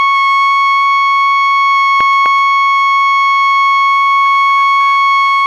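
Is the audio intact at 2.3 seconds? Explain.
No, 2.3 s falls inside a run of CD scratch ticks, 2.01 to 2.51 s, in this music: five tiny clicks, the longest about 1.5 ms, where the player papered over data a scratch wiped out.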